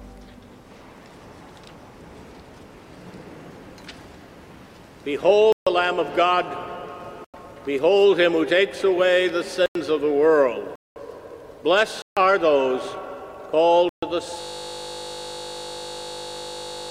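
At 5.52, 7.25, 9.66, 10.76, 12.02 and 13.89 s the sound drops into blocks of digital silence, 90 to 200 ms long. The two 93 ms ones fit a 4096-sample buffer going unfilled. Then at 14.41 s a system hang loop takes over to the end: a 20 ms slice repeats, giving a steady 50 Hz buzz while the hardware keeps cycling the same buffer.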